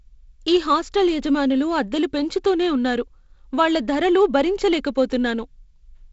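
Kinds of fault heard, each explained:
No faults are present in this speech, which is carried by G.722 wideband telephone coding at 48 kbit/s, so nothing sounds above 7.7 kHz and the lower band carries the light extra noise that comes with that reduced rate.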